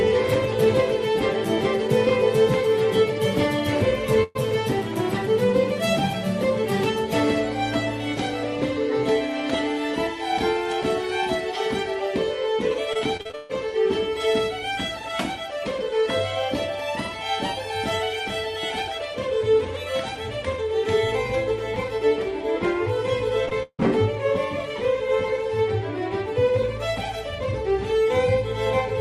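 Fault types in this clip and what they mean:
Burst of packet loss: A single run of consecutive packets failed to arrive in time, leaving one continuous hole from 4.23 to 4.37 s. The receiver bridges it by extending the last stretch of sound for about 115 ms and fading it as the gap lengthens. There is no dropout to silence. When playback resumes, it has skipped ahead, so roughly 120 ms of the original audio is simply absent.
Repeated packet loss (robotic sound): Packets drop out again and again within a short span. Each hole is patched with extended material before the next one arrives, giving a choppy sound with pieces missing. From 12.93 to 13.51 s there are seven gaps, with about half the span concealed, 280 ms missing, and the longest gap 140 ms. From 23.45 to 23.83 s there are four gaps, the longest 159 ms, with 200 ms missing.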